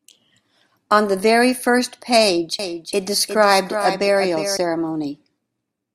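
A doubled audio track runs from 2.59 to 4.57 s in this speech clip. A second, full-band copy of the same audio is mixed in trailing by roughly 400 ms, somewhat quieter than the original, at around 10 dB down. It carries no decay or room colour, so it sounds like a detached repeat rather than an echo, and it cuts in and out abruptly at those edges. The likely cause is the signal being captured twice through a slower parallel path.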